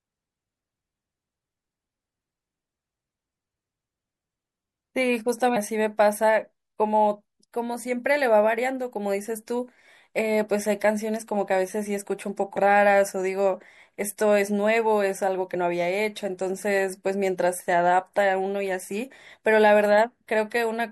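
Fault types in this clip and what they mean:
MP3 compression: Heard throughout the speech as plainly audible codec damage, likely from MP3 encoding at a low bitrate, around 64 kbps by the sound. Short of bits, the encoder trims treble and drops weak frequency detail, leaving a watery, smeared texture.
Compressed frames skipped: At 5.55, 12.55 and 15.53 s the speech jumps ahead by about 400 ms, 70 ms and 30 ms as whole 26.1 ms frames go unplayed. Overlapping neighbour frames make each join a brief smeared blip, not a click.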